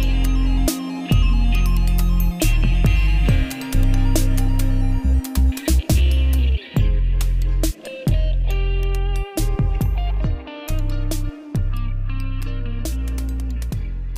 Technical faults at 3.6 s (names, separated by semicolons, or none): sample clock jitter